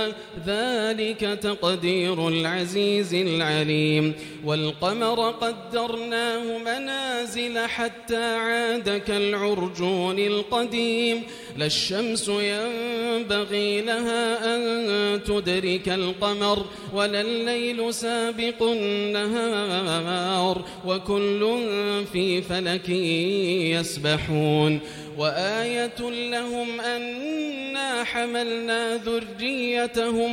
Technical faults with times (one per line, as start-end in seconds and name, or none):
none